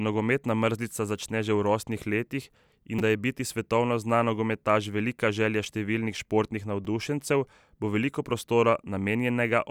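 Repeated buffers occur at 2.99 s and 6.85 s in this speech clip. Fresh audio failed to reach the output in time, so the device replayed the block it already held. Each block lasts about 5.3 ms, which fits a 256-sample buffer. At 2.99 s the block plays three extra times, replacing roughly 15 ms of audio with a brief buzzy click. At 6.85 s it repeats once, causing a single hard click of a few milliseconds.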